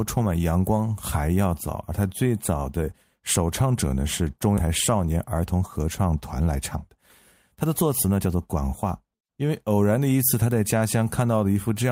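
At 4.57 to 4.68 s the speech lurches forward, about a second of it simply gone, with the two sides butted together almost seamlessly. This is a skip ahead: a stretch of queued audio was dropped, in transit or by the overflowing jitter buffer, and playback resumed with later material.

Shortly after, the talker sounds rushed without any change in pitch, from 5.13 to 5.60 s at 110 % speed, 6.40 to 7.00 s at 113 %, and 7.54 to 9.10 s at 109 %. This jitter buffer speed-up trims tiny pitch-period slices to drain excess delay, roughly 50, 100 and 150 ms in turn.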